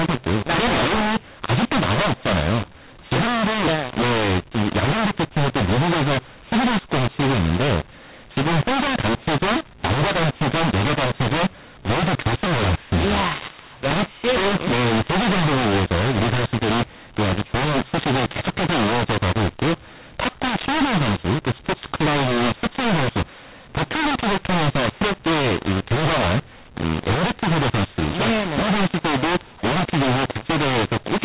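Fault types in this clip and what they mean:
mu-law and A-law mixed up: The speech was coded with A-law and then decoded as mu-law, for the whole clip. The two laws map each code onto different level curves. So every sample comes out at the wrong level. Some are pushed too loud and others too soft. The result is harsh and distorted. The quietest samples are lifted well above silence, so the pauses fill with hiss. The band stops near 4 kHz, which fits 8 kHz telephone coding.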